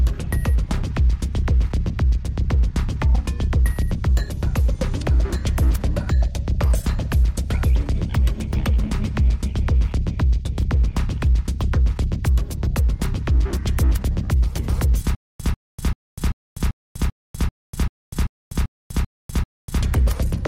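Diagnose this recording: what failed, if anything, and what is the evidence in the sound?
From 15.15 s to 19.83 s the audio falls into a stutter with silent gaps. The same 143 ms burst repeats twelve times, each followed by about 247 ms of dead digital silence, at a steady 390 ms period. The likely cause is a stalled playback stream or buffer that replays its last fragment on each retry and then runs empty. What sets it apart from network packet-loss dropouts is that the burst is identical every time and nothing in between is heard, so that stretch of the audio is lost.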